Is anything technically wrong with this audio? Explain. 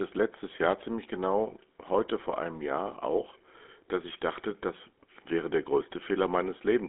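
Yes. GSM full-rate codec damage runs throughout. The speech is rebuilt from a vocal-tract model driven by sparse, regularly spaced pulses, which fits 13 kbps full-rate coding. This leaves a plainly audible buzzy, gravelly roughness in a 250 Hz to 3.6 kHz band, with nothing above 3.8 kHz.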